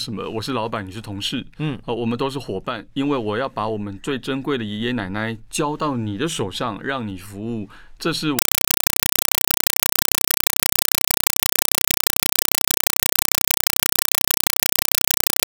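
From 8.39 s to the end, the speech gives way to a compressed stream played as audio: an AC-3 bitstream taken as plain samples rather than decoded. Loud 4 ms noise bursts separated by silent padding repeat at 31.25 Hz, a rigid chatter unlike random hiss or glitches.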